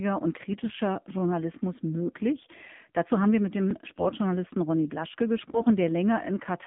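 From the first moment the whole clip sits inside AMR narrowband mobile codec processing. The band runs only from about 150 Hz to 3.6 kHz, so the speech sounds thin and phone-like with nothing up top. The vocal-tract model is clearly working with few bits, which points to one of the lower AMR modes around 7.4 kbps. That's why the voice has that plainly audible buzzy, synthetic edge throughout.

On top of that there are three short bursts of AMR bit errors: 0.50 to 0.78 s, 3.84 to 4.16 s, and 5.48 to 5.71 s. In each one, some of the weakly protected bits in the frames arrived flipped, at a rate of several percent, while the frames still passed their checksum and got decoded. The excitation pulses land in the wrong spots and the fine gain and spectral values go off. Pitch and loudness roughly hold, but for those moments the voice turns hoarse, scratchy and gargly before snapping back.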